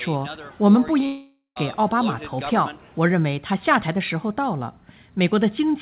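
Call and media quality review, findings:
Long network dropout, 1.06 to 1.58 s. Last sound stretched into a fading buzz, then about 130 ms of silence before audio resumes with roughly half a second gone. Likely cause: packet loss handled by jitter-buffer concealment. Unlike a short concealment glitch, the fill decays to nothing and content is skipped, not delayed. Band stops at 4 kHz, consistent with a G.711 A-law call path at 64 kbps.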